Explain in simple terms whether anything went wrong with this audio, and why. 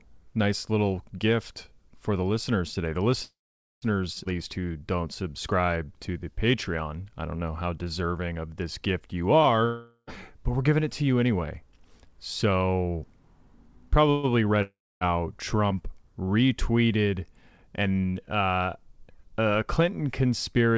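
Call audio freeze, at 3.23 to 3.85 s and again at 14.10 to 14.26 s. The sound stalls, most likely because packets were held up on the way and the receiver's reserve ran empty. The last sound is stretched into a fading buzz that turns to silence for about half a second in the first case. The second is brief, about 0.13 s, with no silence. When the audio resumes, nothing is lost; the rest simply arrives later.

Skip ahead, at 4.24 s. Playback jumps forward almost without a gap, and roughly a fifth of a second of speech is gone. This happens when a piece of audio is dropped while later audio is already waiting. The two sides are joined nearly directly, so the speech seems to lurch.

Jitter buffer slow-down, from 4.36 to 6.32 s. Right after that jump, the receiver's reserve was low. To rebuild it, the receiver repeated tiny slices of the sound over and over. The speech plays at about 90% speed, adding about 0.2 s, with drawn-out sounds but no drop in pitch.

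Long network dropout, at 9.65 to 10.10 s, between "of this gift you" and "but we're giving it", and at 14.62 to 15.04 s. No audio arrived, likely because of a network interruption. The receiver filled in with a fading buzz, and in the second case about a quarter second of silence. Roughly 0.4 s of speech is lost each time, and the audio resumes further on.

Jitter buffer speed-up, from 16.85 to 17.64 s, just before "and uh". This time the receiver held more audio than it needed. It trimmed small slices, roughly 0.1 s in total, so the speech briefly runs about 12% faster and sounds hurried, with the pitch unchanged. The call codec also leaves nothing above 8 kHz.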